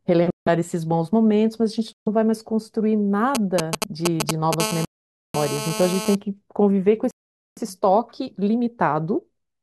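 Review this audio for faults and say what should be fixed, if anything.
The wireless link drops out four times in this speech recording, most likely a Bluetooth stall each time: interference delays packets, the headphone buffer empties, and playback halts until retransmitted data arrives. The sound falls silent for 161 ms at 0.30 s, 135 ms at 1.93 s, 495 ms at 4.85 s and 460 ms at 7.11 s, then resumes. Keeping the source and receiver close, with fewer competing 2.4 GHz devices nearby, would prevent these stalls.

A 2G phone nearby was exchanging signalling with its network from 3.35 to 4.55 s. It transmitted short groups of radio bursts at a 216.7 Hz rate, and the audio circuitry rectified them. These GSM signalling bursts come through as a galloping dit-dit-dit of brief 217 Hz buzzes, roughly as loud as the speech itself. Keeping phones well away from the recording chain, or in flight mode, would prevent this.

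From 4.60 to 6.15 s that phone was in a call and transmitting in bursts 216.7 times a second, so the rectified pulses produce a steady GSM phone buzz. It is a hard, raspy 217 Hz tone with a dense stack of harmonics, about 8 dB below the speech and unrelated to it. It overlaps the long dropout at 4.85 s. Moving the phone away and using shielded cables and inputs would prevent this interference.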